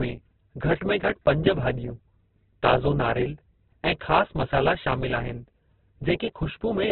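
Throughout the recording, the speech has likely passed through heavy Opus compression in its music (CELT) mode, with so few bits available that the encoder narrowed the bandwidth. That fits a bitrate near 8 kbps. Nothing is present above 4.4 kHz, so the speech sounds muffled and boxed in. The encoder rebuilds starved bands with folded or noise content, which turns voiced sounds rough and grainy rather than swirly.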